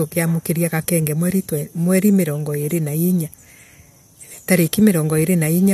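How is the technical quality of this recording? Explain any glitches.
No glitches can be heard in the recording, and the speech signal stays continuous and steady all the way through.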